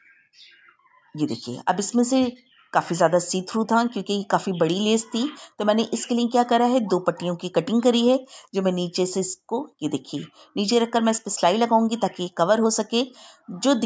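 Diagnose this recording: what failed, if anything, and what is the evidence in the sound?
Nothing stood out on listening; the sound passes through ordinary call microphone processing, with the lowest bass trimmed by its high-pass filter and no content above 8 kHz.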